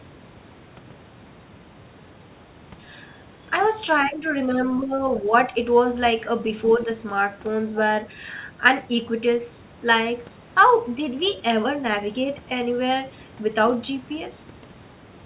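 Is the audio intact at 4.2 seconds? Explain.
No. From 4.06 to 4.26 s the speech level drops by roughly 5 dB for about a fifth of a second and then recovers. This is most likely speech suppressed in double talk: with both ends talking at once, the echo canceller could not tell the near-end talker apart from the loudspeaker echo and turned its output down for that stretch. The result is a brief dip that pulls this talker back.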